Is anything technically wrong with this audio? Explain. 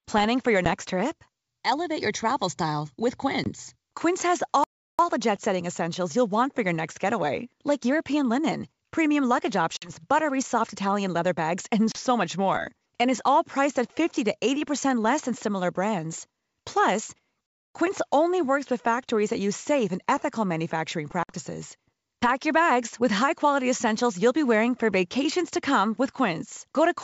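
Yes. The speech has two kinds of fault: short dropouts from packet loss on an ADPCM call, and two longer playback stalls.

Packet loss on an ADPCM call: hard-edged holes appear at 0.65–0.67 s, 3.44–3.50 s, 9.77–9.91 s, 11.92–11.97 s and 21.23–21.33 s, with 10, 20, 50, 30 and 60 ms of audio missing. After each gap the speech returns slightly distorted, settling within some tens of milliseconds. Each hole is where lost packets were replaced by silence, from roughly a single packet at the first gap to several at the last. Because ADPCM codes each sample relative to the previous ones, the receiver's predictor and step size no longer matched the sender's when audio resumed, and the decoder needed a short stretch to catch up. The wideband character, clear up to 7 kHz in the way of G.722 at its full 64 kbit/s mode, is present on either side of these gaps.

Playback stall: at 4.64–4.99 s the sound stops mid-flow for about 350 ms, and at 17.46–17.74 s for about 280 ms, then carries on. 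These gaps are far longer than the packet dropouts. That points to the player running out of buffered data, or its output thread being blocked, as the likely cause, with output held silent until it recovered.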